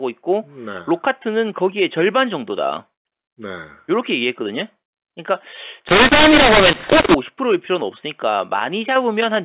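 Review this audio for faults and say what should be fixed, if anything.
mu-law and A-law mixed up, from 5.88 to 7.15 s: speech coded with G.711 mu-law is decoded there as A-law, so sample levels are remapped wrongly. Some peaks grow while others shrink, the quietest samples rise well above silence, and the speech turns harsh, with noise filling the gaps. Around this stretch the mu-law telephone coding is heard band-limited below 4 kHz. To prevent it, carry the G.711 law with the stream and decode every segment with the same law it was encoded with.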